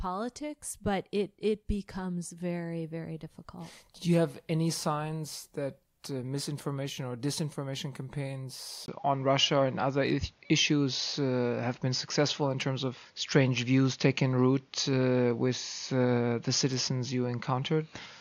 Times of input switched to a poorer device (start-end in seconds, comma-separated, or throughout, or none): 8.86-18.21